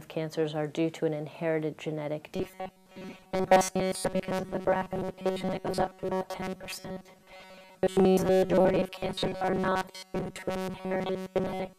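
From 2.36 s to the end, the sound becomes a rigid, metallic buzz near 188 Hz that only loosely tracks the original. This is robotic sound from repeated short buffers, likely caused by audio arriving too seldom, so a roughly 5.3 ms slice is looped over much of the material.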